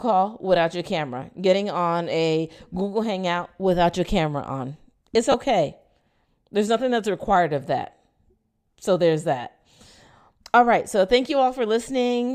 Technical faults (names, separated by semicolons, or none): lost LE Audio frames